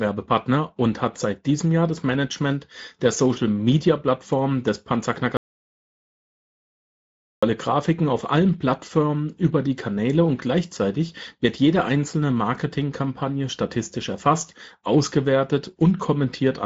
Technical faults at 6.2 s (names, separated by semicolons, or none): Speex codec; audio dropout to silence